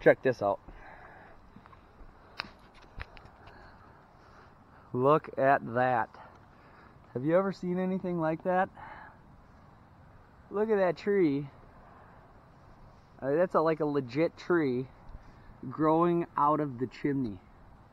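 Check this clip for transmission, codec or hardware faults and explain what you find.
I find no faults in this clip.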